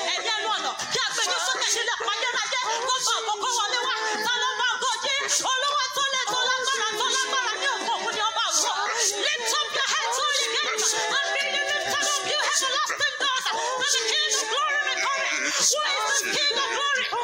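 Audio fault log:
No technical faults are audible anywhere in the audio; the signal stays continuous and steady throughout.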